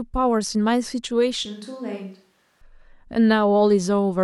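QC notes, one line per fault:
1.46–2.61 s: switch to a distant microphone. The speech abruptly turns roomy and hollow with thinned low end, drops roughly 10 dB and picks up room noise about 35 dB below the speech, likely because the close mic dropped out and a far pickup took over.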